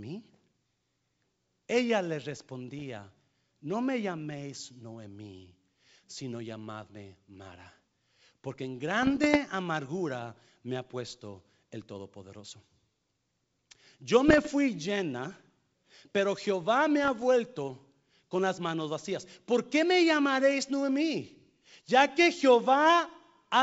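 At 2.79 to 2.82 s, 9.02 to 9.37 s, 14.28 to 14.49 s and 17.04 to 17.23 s the speech breaks into pops and rough bursts, the signature of bit errors on an ADPCM link. It is carried over wideband G.722, with speech clear up to 7 kHz and faint hiss in the upper band. A flipped bit derails the decoder's step size and predictor, so each hit rings briefly. On a waveform this shows as spiky level jumps. A spectrogram shows broadband vertical streaks.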